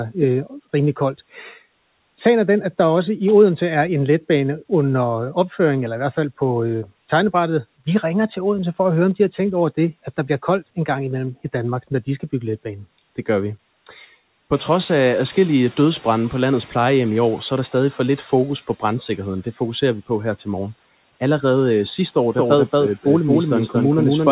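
At 14.53 s the noise suppressor falls behind when the room noise jumps by about 14 dB. Its noise estimate needs 3.47 s to catch up. Until 18.0 s the louder background passes through with less reduction, then sinks by about 7 dB just before "lidt fokus på brandsikkerheden".

From 22.37 s, after "øh sidste år", a doubled audio track appears, likely a second capture over a slower path. A full-band copy at roughly equal level trails by about 200 ms with no room colour. It starts abruptly and runs to the end.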